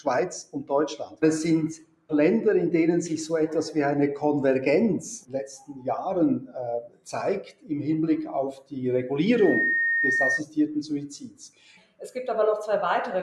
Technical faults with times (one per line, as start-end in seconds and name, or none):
0.00-13.23 noise suppressor applied to music or sounds
0.43-1.23 sound cut by the noise suppressor
1.75-2.11 sound cut by the noise suppressor
5.21-5.87 sound cut by the noise suppressor
6.40-7.08 sound cut by the noise suppressor
7.43-7.70 sound cut by the noise suppressor
8.52-8.73 sound cut by the noise suppressor
9.32-10.42 loudspeaker feedback squeal
11.15-12.09 sound cut by the noise suppressor